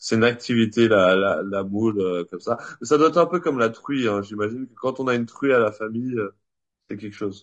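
Speech throughout sounds rough and grainy, with noise between pitch harmonics, pointing likely to low-delay AAC compression near 32 kbps, whose short frames blur harmonics, unlike plain bandwidth loss.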